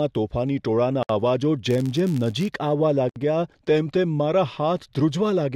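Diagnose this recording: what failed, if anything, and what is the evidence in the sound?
Codec stage: a gap at a join of encoded pieces, about 64 ms at 1.03 s after "તોફાની ટોળાના" and 67 ms at 3.09 s. Unstripped encoder padding, two seconds apart.

Processing stage: a filter restarted on every block. From 1.66 to 2.52 s after "તોફાની ટોળાના અવાજો" there's a level-following 93.8 Hz buzz, which fits a 512-sample buffer.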